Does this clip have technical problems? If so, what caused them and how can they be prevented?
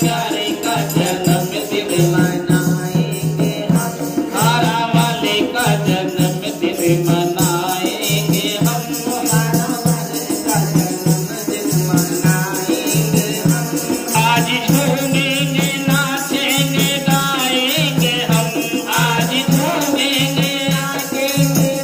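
No, nothing in the audio points to a technical fault, so there is no cause to trace and nothing to prevent.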